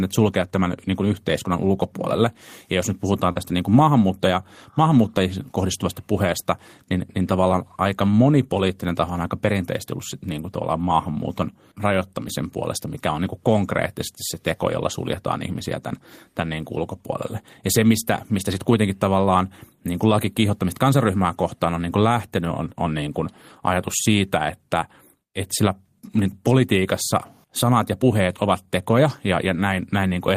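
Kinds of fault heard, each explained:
Short concealed packet loss: about 40 ms of the speech never reached the decoder in time, so the receiver extended the preceding sound and blended back into the real audio, leaving a brief smear between "jos nyt puhutaan" and "niin kuin maahanmuuttaja maahanmuuttajien", around 3.31 to 3.38 s. A spectrogram shows the last spectral pattern running on unnaturally steady for that stretch, and the waveform continues without a hard break.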